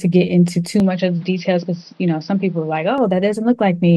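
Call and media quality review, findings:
Speech turns dull and boxy at 0.8 s, clears at 2.98 s. No gap at either switch. Nothing above 6 kHz. Level down about 5 dB. New noise floor roughly 35 dB under the speech. Likely cause: input switched to a poorer, narrower-band device.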